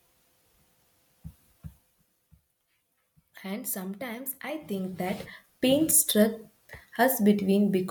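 A speech recording with zipper noise from 4.25 to 5.69 s. The level moves by roughly 15 dB in unsmoothed 2 dB steps, about seven per second, and each jump puts a small click into the signal, so a ticking zipper rides on the speech throughout the change.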